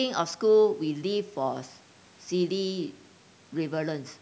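Nothing stood out on listening to the speech, which has been through a call's microphone processing and carries nothing above about 8 kHz.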